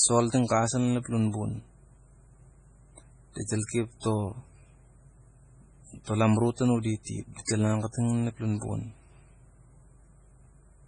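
A speech recording runs throughout with a watery, swirling quality, sibilants smeared into metallic chirps and nothing at all above 10.5 kHz, so the top end sounds dull and closed in. This is heavy codec damage, likely from MP3 compression at a starved bitrate, with the sound pointing to something near 24 kbps. With so few bits, the encoder cut the treble at a fixed frequency and dropped weak frequency lines that flicker in and out from frame to frame. At 7.03 to 7.07 s, a sharp attack is preceded by about 35 ms of hiss and lands soft instead of crisp. That is pre-echo. The attack fell late in a transform block, so quantisation noise sized for the loud onset was spread evenly across the block and leaked into the quiet moment just before it.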